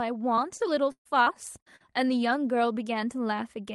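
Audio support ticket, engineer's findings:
Repeated packet loss (robotic sound), 0.35–1.82 s. Six dropouts, longest 133 ms, about a fifth of the span. Choppy speech with pieces missing. Jitter buffer/concealment: late or lost packets patched by stretching prior audio. Top end stops near 12 kHz, consistent with Opus at roughly 32 kbps.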